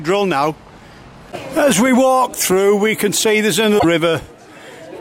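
Damaged data in the compressed stream appears from 3.76 to 3.85 s. Corrupted bytes there make the decoder misread those frames and lose sync until it locks onto a later frame header, so the sound breaks into a brief chirp, squawk, click or short hole lasting about 90 ms.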